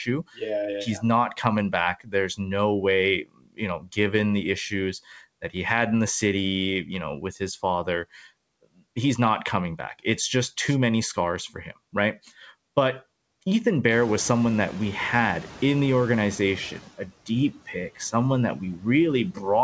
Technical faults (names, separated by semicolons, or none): noise suppressor artifacts; speech cut by the noise suppressor; noise suppressor catching up